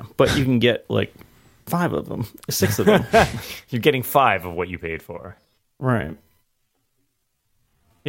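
A speech recording that abruptly slows down from 5.09 s to the end at 8.08 s, where a time-stretched section runs at about 0.61 times the original pace while the pitch stays put. The slowed part drags, likely because software stretched the audio by repeating short pieces. On a spectrogram the harmonic lines keep their spacing but syllable shapes widen sideways, and the waveform shows blurred onsets and duplicated cycle patterns.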